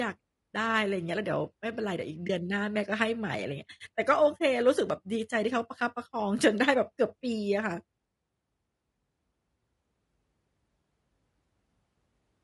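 Throughout, the speech sounds rough and grainy, with noise filling between harmonics and a thin top band, likely low-delay AAC compression at a rate fitting about 32 kbps. A spectrogram shows smeared harmonics. At 2.27 to 2.30 s, AAC frame loss with muting leaves a brief dip of about one frame, about 20 ms of zeroed spectrum, appearing as a brief tapered gap in the waveform.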